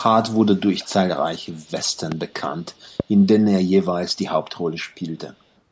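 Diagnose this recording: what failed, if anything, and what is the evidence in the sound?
Echo leak from call processing: a faint copy trails the speech by 181 ms at 0.34–0.9, 1.48–1.69, 2.54–2.85 and 3.17–3.21 s, likely far-end loudspeaker residue the echo canceller missed.

Loud pops at 2.12–2.14 and 3.00–3.02 s jump well above the speech, which carries on underneath, likely a voltage step in the analogue wiring or a driver glitch.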